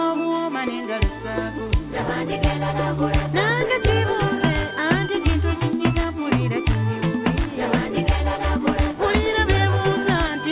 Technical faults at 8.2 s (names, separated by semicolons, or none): none